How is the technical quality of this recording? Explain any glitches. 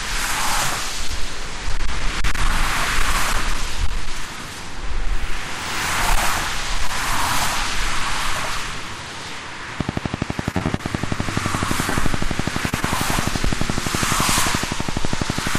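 Quality is poor: the whole recording is overloaded, and a burst of network faults between 10.5 and 12.8 s adds choppy and smeared moments.

Hard clipping runs throughout. The signal was driven about 10 dB beyond what a stage in the chain could pass, so a few percent of samples had their peaks sheared flat. Those flattened tops generate high harmonics, giving loud moments a harsh, crackly fuzz.

Repeated packet loss (robotic sound) occurs from 10.51 to 10.81 s. Four gaps, the longest 31 ms and 60 ms missing in total, were each patched by extending the preceding sound, covering about a third of that span. The result is a choppy stretch with fragments missing.

Short concealed packet loss appears twice, at 11.89 to 11.93 s and 12.69 to 12.74 s. Each time about 20 ms never arrived, and the receiver filled the hole by continuing the last sound before blending back. Each is heard as a brief smear or wobble.

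A short stall from a late packet follows at 12.80 to 12.84 s. A packet arrived 20 ms late, the jitter buffer ran dry, and the last sound was stretched until it came. Nothing is lost, but the sound hangs slightly too long with a slight buzz or dip.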